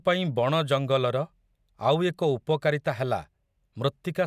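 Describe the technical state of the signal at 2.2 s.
At 2.2 s the speech signal is intact, with no audible fault at that moment.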